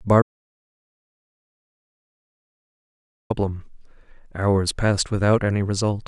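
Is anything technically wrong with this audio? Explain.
Yes. From 0.22 s to 3.30 s the speech drops out to silence, losing about 3.08 s of audio. The sound cuts off abruptly shortly after the start and resumes just as abruptly mid-flow. The gap is silent with no room tone or noise floor, which points to the input signal vanishing while recording continued. The likely cause is a disconnected or failed input device, a broken link, or an accidental mute. Whatever was said in that interval is unrecoverable.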